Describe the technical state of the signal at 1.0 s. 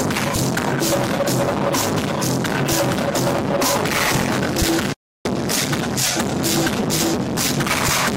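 At 1.0 s the signal is intact, with no audible fault at that moment.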